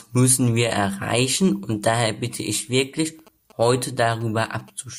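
From 3.19 s to 4.70 s, GSM signalling bursts break into the speech: a galloping dit-dit-dit of short 217 Hz buzzes, roughly 25 dB below the talker. A nearby 2G phone is exchanging signalling bursts, which the audio circuitry rectifies into audible interference.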